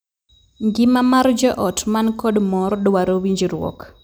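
From start to end, the two channels drift apart: separate device clocks, mismatched by around 30 parts per million, let the inter-channel delay creep to a small fraction of a millisecond. Summed to mono, comb notches glide slowly through the speech, heard as slow flanging.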